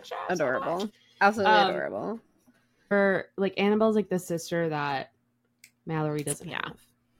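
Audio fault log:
2.90 s stream segment skipped: one segment of the stream likely failed to load and playback resumed from the next, so the speech jumps ahead abruptly with a small blip.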